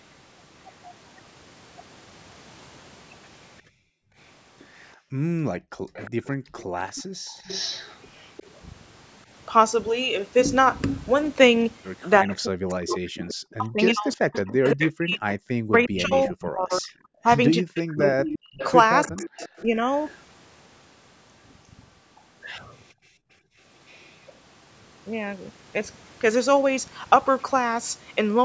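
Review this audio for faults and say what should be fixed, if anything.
Background gated by the echo canceller: the room sound drops away from 3.62 to 6.55 s (about 1.5 s in total, up to about 40 dB deep), again at 18.41 to 18.53 s (about 32 dB) and at 22.94 to 23.58 s (about 27 dB). The canceller clamped the microphone while the loudspeaker played. Unlike double-talk suppression, it is the ambience, not the talker, that vanishes. Gentler residual suppression or comfort noise would prevent it.

Echo leak: a delayed copy of the speech, 353 ms late and around 15 dB below the main voice, runs from 5.93 to 8.6 s and from 12.33 to 24.33 s. The likely cause is a far-end echo canceller failing to remove its loudspeaker pickup. The fixed lag separates it from room reverberation, which smears rather than repeats. Better echo-path adaptation, or using a headset, would prevent it.

Speech suppressed in double talk: the talker's voice dips or cuts out in pieces from 6.95 to 7.14 s and across 12.22 to 19.81 s (roughly 4 s affected, up to about 40 dB). 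This is likely the canceller muting both sides while the two talked at once. Unlike gating, the voice itself breaks up. A double-talk detector that holds adaptation would prevent it.

The call's microphone high-pass and band limit, with nothing above 8 kHz, are working normally.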